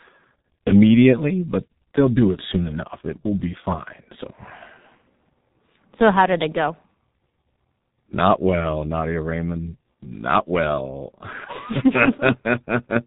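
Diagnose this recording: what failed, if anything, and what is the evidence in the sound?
The damage happens at the codec stage and runs the whole length of the speech: a heavy G.723.1 codec signature. Nothing survives above 3.8 kHz, so a spectrogram shows a hard ceiling with empty space overhead, and the harmonics below it look smeared across blocks rather than finely resolved. The voice comes out muffled and hoarse with blurred consonants, which fits a bitrate near 6 kbit/s. The codec rebuilds the voice from a coarse model refreshed only every 30 ms frame.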